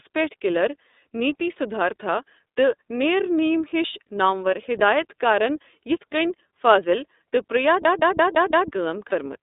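Speech heard through a narrowband line: everything sits between about 250 Hz and 3.7 kHz, with a slightly rough, synthetic edge typical of the iLBC codec. Its texture fits iLBC's 13.33 kbps mode with 30 ms frames, each coded independently, unlike a muffled but smooth filtered line. From 7.85 to 8.70 s, just after "فاضل تہٕ", a system hang loop repeats one 171 ms slice exactly five times at 5.86 Hz, a machine-gun stutter that fits an 8192-sample buffer and costs about a second of audio. Those repeats are identical copies, not invented sound. A lost iLBC frame at 9.09 to 9.13 s is different: the decoder fills the 30 ms gap by holding the last pitch cycle mixed with noise, giving a brief buzzy held vowel, and clean decoding resumes immediately afterwards.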